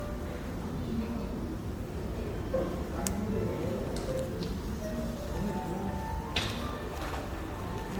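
From start to finish the sound has a swirling, hollow, smeared quality, with transients losing their edge. This is generation loss, likely from around seven rounds of MP3 decoding and re-encoding at a rate that fits 96 kbit/s, each pass requantising on a shifted frame grid so the damage compounds. A spectrogram shows flickering holes and blotchy gaps across the upper bands, with nothing above about 19.9 kHz, and the waveform shows softened, smeared attacks.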